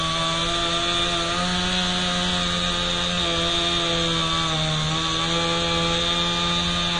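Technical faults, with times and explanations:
Throughout, AAC compression: the audio sounds dull and smeared, with a warbling, fizzy texture on sustained parts and hiss-like detail. Nothing is heard above 9.7 kHz, so the top end is simply gone. The likely cause is low-bitrate AAC-LC coding, which fits roughly 32 kbps. With so few bits, the encoder lowers its cut-off and quantises coarsely. Weak spectral detail drops out or turns to substitute noise, so the damage is plainly audible.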